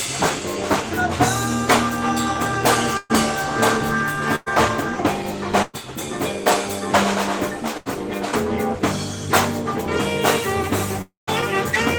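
At 2.97, 4.36, 5.62 and 7.77 s the sound freezes into a brief fading buzz or hiss for about 80 to 120 ms before jumping ahead. Each is a burst of packet loss, with the receiver stretching the last sound over the missing audio. At 11.02 s a longer fading buzz or hiss runs into a short silence before the audio returns at 11.29 s, skipping about 260 ms. The likely cause is a long network dropout.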